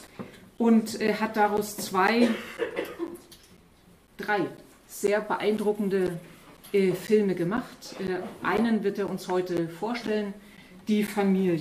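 A background task stalls the USB bus or audio driver every 0.5 s from 0.07 to 11.08 s, causing periodic USB or driver dropouts. Each stall blanks roughly 10 ms of audio with silence, around twenty times, heard as evenly spaced ticks wherever signal is present.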